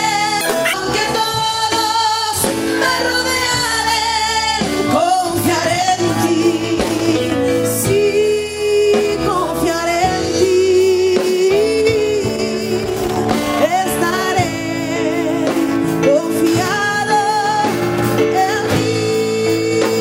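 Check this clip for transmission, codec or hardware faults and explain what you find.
One transmission fault is present. From 0.41 to 0.74 s the audio is read two samples at a time, at double speed. The reader treats each pair of samples as a single frame, so playback runs 2.0 times fast and an octave high.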